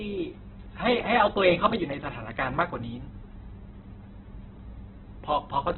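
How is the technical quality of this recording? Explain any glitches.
The quality is poor, because of heavy compression damage across the whole clip. From start to finish, Opus compression is the likely cause, with the encoder running in its CELT music mode at a rate that points to about 8 kbps. Short of bits, it fills bands with noise rather than real detail and narrows the bandwidth, so the speech sounds grainy and rough, with nothing above 4.2 kHz.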